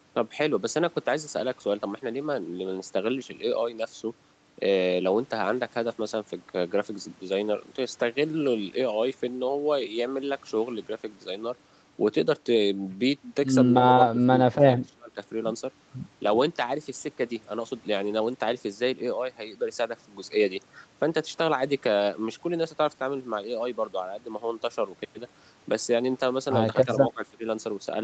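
At 14.11 to 14.2 s the speech dips by about 15 dB. From 14.64 to 15.18 s it drops harder, about 25 dB, breaking into pieces that total roughly 300 ms. At 27.14 to 27.44 s it falls about 20 dB. These are likely speech suppressed in double talk: the echo canceller could not separate the talker from loudspeaker echo and turned the level down. A waveform shows the envelope pinched thin. A spectrogram shows short faint vertical gaps across a band that stops at 8 kHz.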